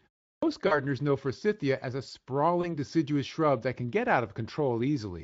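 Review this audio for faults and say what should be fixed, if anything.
The speech enters at 0.35 s, after 0.35 s of silence, with a clipped start after a pause: roughly the first 75 ms of sound, through 0.43 s, is missing. The output device appears to doze during the silence and is still waking or re-locking when the signal arrives, so the onset is cut. On a waveform the envelope jumps from flat with no attack, and a spectrogram shows energy starting on a hard vertical edge. Keeping the device stream open or feeding it low-level padding during silence would prevent this.

VoIP packet loss concealed by the speech codec occurs twice. From 0.67 to 0.80 s about 40 ms is missing, which fits two 20 ms frames. From 2.61 to 2.75 s about 20 ms is missing, consistent with a single frame. In each gap the decoder extends its last pitch and spectral shape at falling gain, stretching the sound into a fading buzzy tone or coloured noise. 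Because each frame builds on the one before, the sound stays weak past the gap, which is why both spans outlast the lost audio. A spectrogram shows harmonics frozen flat and fading, and the waveform shows a repetitive, decaying periodic stretch. The Speex stream's light coding colouration sits underneath throughout. A larger jitter buffer together with forward error correction or redundancy would reduce these losses.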